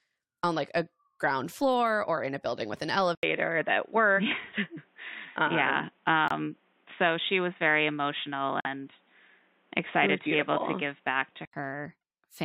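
At 3.15 s there's a short gap, about 80 ms of nothing, and then the speech comes back dull and boxy. Nothing reaches above 3.8 kHz, and a new background hiss sits roughly 40 dB under the speech, though the level hardly moves. That's most likely the input switched to a poorer device, something like a headset in its call mode, with a narrower band and its own noise floor. The full, open sound returns at 11.53 s.

Inside that stretch there are two abrupt holes. The first, at 6.28 s, lasts about 36 ms, which fits one corrupt frame muted: the decoder rejected a damaged compressed frame and the player filled the slot with silence. The second runs from 8.60 to 8.67 s, about 64 ms, which points to two frames in a row dropped the same way. In both cases the speech picks up on time afterwards, with no shift in timing.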